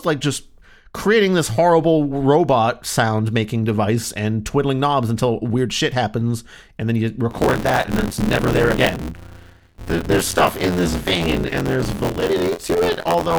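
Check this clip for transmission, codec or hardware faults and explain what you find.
One hardware fault: buffer tearing from 7.30 s to the end. Writer and reader cross each period, so about a third of each buffer replays audio about 20 ms stale, giving a rattling 86.1 Hz buzz that fits a 512-sample buffer.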